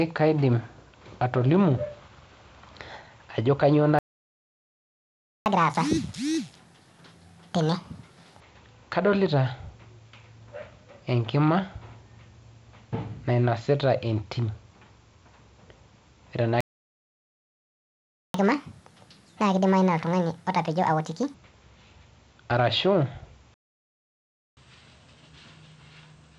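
At 3.99 s, just after "ajo kanyoo", the speech cuts out. This is a playback stall. The output stays silent for 1.47 s, to 5.46 s. The likely cause is the player running dry of data. When sound returns, catch-up at higher speed begins. The player runs the backlog at 1.5 times normal speed until 8.40 s. Pitch rises by roughly seven semitones, so the speech sounds hurried and shrill. It then settles back.

A second stall runs from 16.61 s to 18.34 s. That gap lasts 1.74 s. Catch-up follows from 18.34 s to 21.34 s, again at 1.5 times speed. The pitch lift is just as marked.

A third stall silences the audio from 23.54 s to 24.57 s, for 1.03 s. The final catch-up is gentler. It plays at 1.15 times speed, about two semitones high, and it lasts until the clip ends.

All through, the speech carries the wideband telephone band limit, near 7 kHz.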